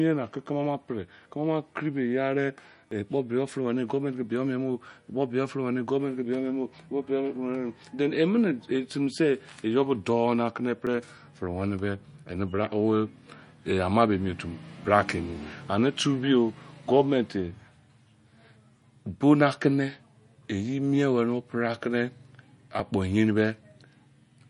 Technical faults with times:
0.00-24.50 MP3 compression
2.91 audio missing between chunks
6.89 audio missing between chunks
10.87 audio missing between chunks
14.84 audio missing between chunks
18.82 audio missing between chunks
22.80 audio missing between chunks

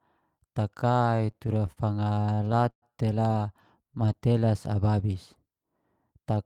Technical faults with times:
1.17-1.79 repeated stalls (stutter)
2.17-2.84 repeated stalls (stutter)
3.82-4.46 jitter buffer slow-down

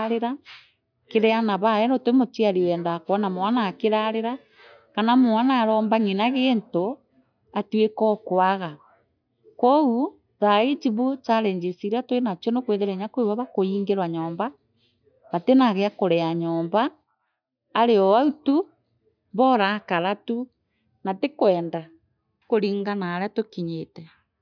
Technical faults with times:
none

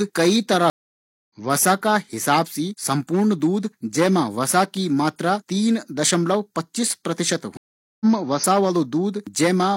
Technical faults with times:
0.70-1.30 stream reconnect
7.57-8.06 stream reconnect

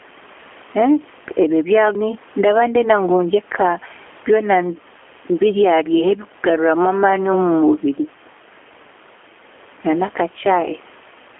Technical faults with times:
0.00-11.40 gain pumping
0.00-11.40 G.729 codec

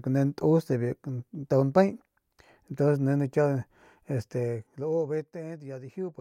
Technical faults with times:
4.11-5.39 zipper noise

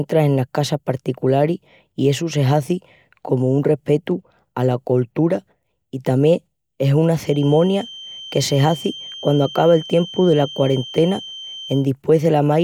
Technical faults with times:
7.19-11.88 feedback whistle

